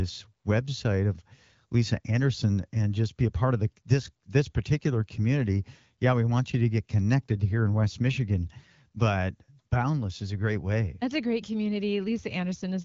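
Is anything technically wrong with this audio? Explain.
No, nothing here is actually wrong: it's speech carried over an AMR wideband (HD Voice) link, with the top end stopping around 7.5 kHz and the light coding texture you'd expect at a rate that fits 12.65 kbit/s, which is just how that codec normally sounds.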